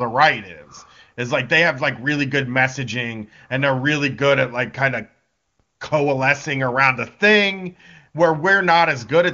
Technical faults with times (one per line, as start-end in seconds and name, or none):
none